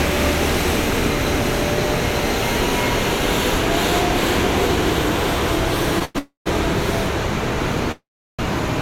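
A recording of everyday sounds with three hold-ups in its last few seconds. The first is a short stall from a late packet at 6.05 to 6.17 s. The receiver's jitter buffer emptied, so the last sound was stretched for 100 ms until the data arrived, and playback resumed at the same point with nothing lost. On a spectrogram this shows as a brief band of smeared, horizontally repeated texture. The waveform holds a level, periodic stretch. Everything after it plays 100 ms late. Right behind it, from 6.19 to 6.48 s, comes a call audio freeze. The last sound continues as a fading tail and then drops to about 120 ms of silence before resuming intact, 271 ms later than before. A second freeze from 7.92 to 8.41 s lasts 470 ms, including roughly 350 ms of silence. The likely cause of both is packets held up in transit, with the receiver filling the wait. On a spectrogram each freeze is a decaying smear that fades into a blank gap. 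The waveform shows a tapering envelope followed by a flat line, and no audio goes missing.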